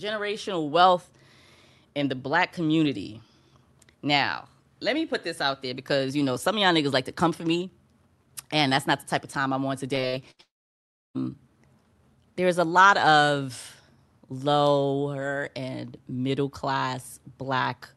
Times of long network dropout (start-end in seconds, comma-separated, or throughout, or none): 10.41-11.17